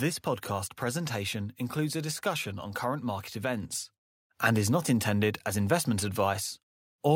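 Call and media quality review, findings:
Microphone volume stepped up at 3.63 s: speech and background noise floor jump together by about 5 dB in one step. Probable component: call software's automatic input gain control, raising the device's microphone level after judging input too quiet.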